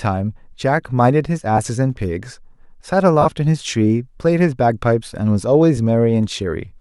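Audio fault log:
1.57 s, lost LE Audio frames: a 7.5 ms dropout in the speech, concealed by the LC3 decoder replaying the previous spectrum with random signs, leaving a brief noisy blur.
3.21 to 3.26 s, lost LE Audio frames: a longer 37.5 ms gap, which fits five consecutive 7.5 ms frames. The repeated spectrum with scrambled signs smears into noise and begins fading as concealment continues.
5.77 s, lost LE Audio frames: another single 7.5 ms loss, heard as a short grainy smear where the decoder substitutes the prior frame's spectrum with randomised signs.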